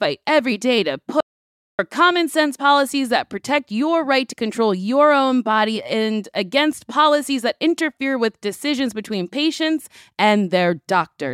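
At 1.21 s the speech cuts to silence until 1.79 s, losing about 0.58 s; this audio dropout to silence likely came from a briefly lost input.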